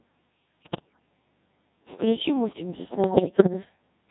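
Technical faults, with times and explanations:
Throughout: Codec 2 vocoder. The speech is carried by a very low-rate digital-radio vocoder running at a rate consistent with 1.6 kbit/s, and the damage is heavy. Rather than keeping the waveform, the decoder rebuilds each frame from a pitch, a voicing decision, an energy level and a coarse spectral envelope, then synthesises it from sine waves. The result is a robotic, buzzy voice.
0.64 to 0.99 s and 3.04 to 3.53 s: bit errors on digital voice radio. In both stretches the vocoder receives corrupted data. Because so few bits describe a whole frame, one flipped bit can throw off that frame's pitch, loudness, voicing or spectral shape, and the synthetic voice lurches into bleeps, warbles and garbled robotic noise. The first burst is denser, with roughly one bit in seven wrong. The second is milder, at a few percent, but lasts longer.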